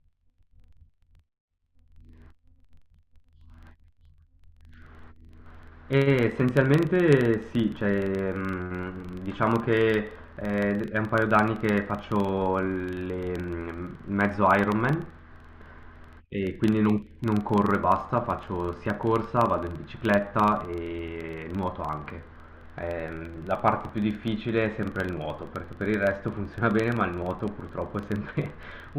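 Throughout the speech a steady tick-buzz at about 23.4 Hz, which fits a 2048-sample block, points to a filter restarted on every block from silence.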